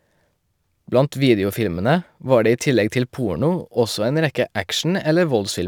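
Throughout the speech, sample clock jitter adds a faint hiss riding on louder, brighter syllables: timing errors of roughly 3 microseconds leave noise about 35 dB below the signal. A spectrogram shows broadband haze tracking high-energy passages, clearing completely in pauses.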